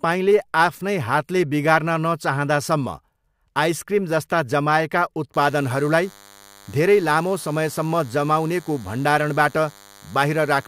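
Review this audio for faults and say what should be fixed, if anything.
A DECT cordless phone buzz starts at 5.34 s, right after "आइसक्रिमजस्ता जमाएका", and lasts to the end. It is a thin, steady 100 Hz buzz with many harmonics, roughly 25 dB below the speech. The audio circuit is rectifying the radio bursts that a nearby DECT handset or base sends every 10 ms. Keep DECT phones and base stations well away from the microphone, cables and interface while recording.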